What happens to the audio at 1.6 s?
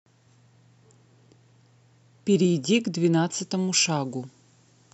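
At 1.6 s the speech runs on without interruption, with no dropout, click, distortion or other fault at that moment.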